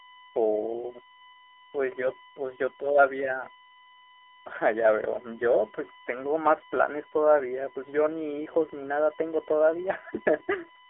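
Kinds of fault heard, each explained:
USB whine: A fixed-pitch whine built on a 1 kHz series, from the bus's 1 ms frame current leaking through power or ground. It runs throughout at roughly 20 dB below the speech, strongest near 10 kHz. Unlike mains hum, its base is 1 kHz rather than 50 or 60 Hz.
AMR narrowband mobile codec: The speech is confined to a telephone band of 300 Hz to 3.5 kHz, with nothing above 3.6 kHz. The codec damage is plainly audible as a buzzy, synthetic voice, which fits a low AMR-NB rate around 7.4 kbps. A plain low-pass filter would leave the voice natural.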